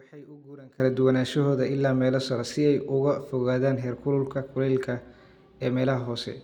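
From the start to 0.8 s the speech is faint, about 24 dB down, before normal level returns at "duwanaanshahooda ilaa meelo sare". This points to one channel inverted, likely: with one side's polarity reversed, everything shared by the two channels cancels in the mono sum, leaving only their faint difference. Unlike a plain dropout or gain dip, a faint residue survives rather than silence or an evenly quieter signal.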